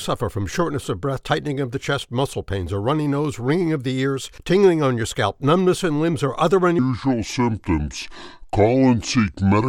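A section at the wrong speed runs from 6.79 s to the end at 9.68 s, playing at 0.695 times its recorded rate, likely from the audio being fitted to a mismatched clock. Speed and pitch drop together, leaving the sound slowed, dragging and about seven semitones deeper.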